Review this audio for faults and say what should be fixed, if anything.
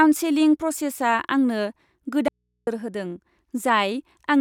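At 2.28 s the speech cuts out abruptly. It returns at 2.67 s, about 390 ms later. The gap holds only faint mains hum, roughly 55 dB below the speech. This is an audio dropout to a faint residue. The signal was likely lost upstream while the input stayed open. Prevent it by securing the source connection and monitoring the feed for interruptions.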